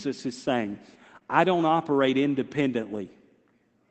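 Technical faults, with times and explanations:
1.15–1.17 s, lost packet rebuilt from error correction: after "is saying", one 20 ms packet played from its low-bitrate Opus copy, leaving no gap but a rougher, noisier patch, visible as grainier, blurred harmonics.
1.19–1.23 s, short concealed packet loss: before "I don't operate", 20 ms never arrived. The decoder extended the preceding sound, then blended back, causing a brief smear without a waveform dropout.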